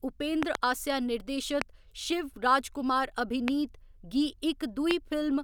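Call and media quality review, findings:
Loud pop at 0.43–0.57 s (double), 1.62, 3.48, 4.91 s. Sharp transients around 20 dB over the speech, speech continuing underneath. Likely a voltage step from a switch, static discharge or driver glitch, shaped by downstream circuitry into a brief thump.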